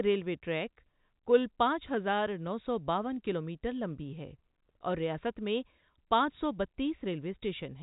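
No faults are audible in the speech, which is band-limited at about 3.8 kHz, consistent with G.711 A-law telephone coding.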